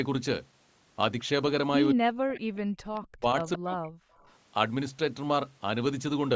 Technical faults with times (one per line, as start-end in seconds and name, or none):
1.93-2.53 speech suppressed in double talk
2.55-2.59 echo leak
2.95-3.00 echo leak
2.99-4.01 speech suppressed in double talk
4.12-4.36 echo leak